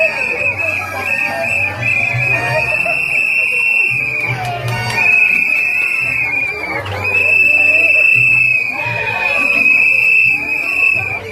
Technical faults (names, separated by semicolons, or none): none